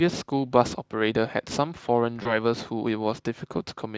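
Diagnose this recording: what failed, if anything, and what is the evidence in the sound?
VoIP packet loss concealed by the speech codec, at 2.23 s to 2.39 s, a network fault: about 20 ms of audio goes missing, consistent with a single dropped frame. The Speex decoder extrapolates from its last pitch and filter, so the gap becomes a brief buzzy or noisy, fading smear, and the sound stays weakened until about 2.39 s as the decoder recovers.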